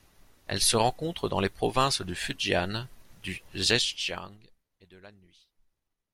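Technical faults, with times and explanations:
3.81–4.64 s, zipper noise: the speech level falls roughly 25 dB in unsmoothed 3 dB jumps, about ten per second, each jump clicking, so a ticking zip rides the sound before "et de". The waveform envelope forms a staircase, and the spectrogram shows faint vertical lines at each step.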